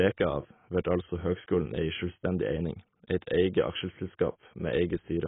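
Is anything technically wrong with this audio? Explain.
Yes. Throughout the speech, the encoding is likely heavy AAC compression at a very low bitrate, around 16 kbps. Squeezing the spectrum that hard removes everything above 3.8 kHz and coarsely quantises what remains, so the voice sounds dull and smeared, with a warbling, fizzy edge on sibilants.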